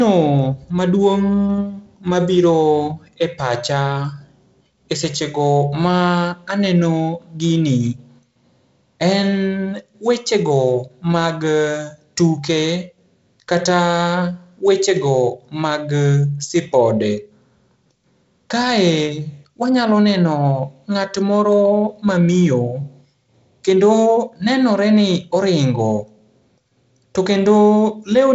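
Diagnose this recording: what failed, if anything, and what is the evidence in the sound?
Nothing has failed: the speech comes through a working G.722 wideband telephone coding path, with content ending near 7.7 kHz and a light codec grain that fits the 48 kbit/s mode, which is expected for that stage.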